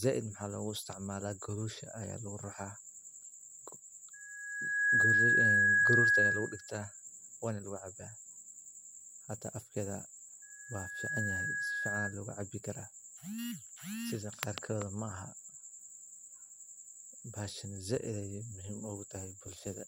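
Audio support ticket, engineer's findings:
Loudspeaker feedback squeal, 4.13–6.72 s and 10.42–12.16 s: 1.7 kHz tone swelling over under a second, well above speech, then weaker. Mic-to-speaker loop; the build-up distinguishes it from steady whistle.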